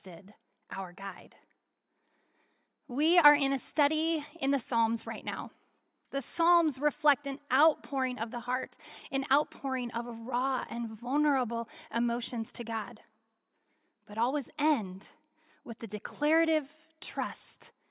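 Speech recording, no audible technical faults at any point.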